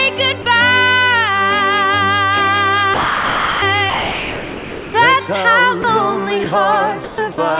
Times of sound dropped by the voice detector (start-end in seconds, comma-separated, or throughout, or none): 0.42-0.46, 2.94-3.62, 3.90-4.94, 5.82, 6.44, 7.04-7.38